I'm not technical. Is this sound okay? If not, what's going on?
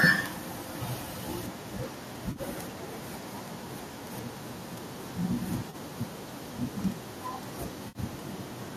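No. Three brief glitches interrupt the speech, at 2.31 to 2.40 seconds, 5.70 to 5.75 seconds, and 7.88 to 7.98 seconds. Each is a moment where the sound goes smeared, hissy or hollow instead of clear. This is AAC frame loss with concealment. Small chunks of the audio stream went missing, and the decoder patched each gap by guessing from the sound just before it. Each gap lasts only about 30 to 70 milliseconds, so the patches never fade fully to silence. They just blur for an instant. The gap lengths fit the roughly 10-millisecond chunks of the low-delay AAC format used on video calls, which is the likely source.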